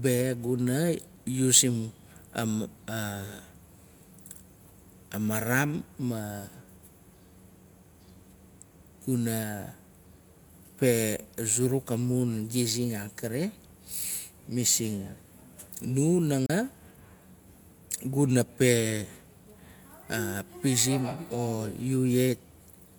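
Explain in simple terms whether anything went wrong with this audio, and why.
At 16.46 s the speech briefly drops out. For a split second, until 16.50 s, the sound fades away almost instantly and then comes straight back, leaving a tiny hole of silence of about 32 ms. This is a digital broadcast dropout: the receiver lost or got a damaged piece of the signal, silenced it rather than play noise, and resumed once good data arrived. The short gap fits a single lost frame, and what was said in it is gone.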